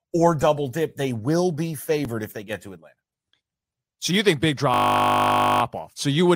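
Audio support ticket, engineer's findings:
Repeated buffer at 2.05 s, between "dip they will be" and "if they get to". Symptom: a 5 ms piece heard twice. Probable component: the output buffer feeding the device. Mechanism: fresh audio arrived late, so the last 5 ms piece played once more with a hard join at each edge. That length fits a 5 ms buffer, too short to be heard as a stutter.

System hang loop, 4.74 s to 5.62 s, right after "you think big". Symptom: a steady buzz at 50 Hz for almost 0.9 s. Probable component: the driver or host stalling while the sound hardware kept running. Mechanism: the hardware cycled the same 20 ms stretch of its ring buffer, repeating it dozens of times. That loop length gives the 50 Hz buzz.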